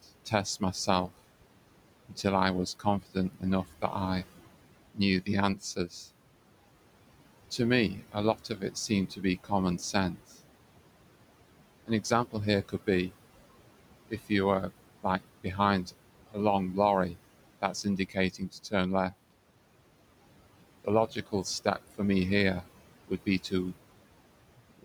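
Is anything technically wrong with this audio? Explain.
Yes. Two related faults come from the noise suppressor.

Noise suppressor artifacts run through the whole clip. The suppressor judges, frame by frame, which frequency bands hold steady noise and pulls those bands down by about 18 dB. The room noise, which sits about 16 dB below the speech, therefore drops away in the gaps and swells back under the speech.

Speech cut by the noise suppressor happens in seven spans: 0.02–1.1 s, 2.09–3.95 s, 4.94–5.93 s, 7.58–10.19 s, 11.86–13.12 s, 14.09–19.13 s and 20.84–23.75 s. In each span the suppressor misreads quiet parts of the speech as noise and lowers them along with the background. The deepest drop is about 14 to 18 dB, and the affected sound adds up to somewhere between a brief moment and about half a second per span. Soft consonants and word endings come across as swallowed or faint.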